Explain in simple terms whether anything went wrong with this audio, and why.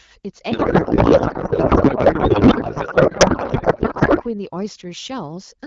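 A codec payload misread: the receiving end unpacked the AMR wideband (HD Voice) data using the wrong bit layout, so fields landed in the wrong places. From 0.51 to 4.24 s the speech turns into garbled noise and warble that barely tracks it.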